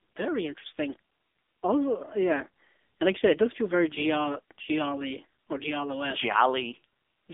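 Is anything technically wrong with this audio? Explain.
Yes. Throughout the speech, the voice sounds thin, boxed-in and buzzy, with a synthetic edge. This is AMR narrowband mobile codec damage, and it is heavy. Nothing above about 3.7 kHz survives, and the band sits roughly between 250 Hz and 3.6 kHz, like a phone line. The codec rebuilds the voice from a vocal-tract model excited by sparse pulses. The coarse, buzzy texture points to a low AMR-NB mode around 6.7 kbps.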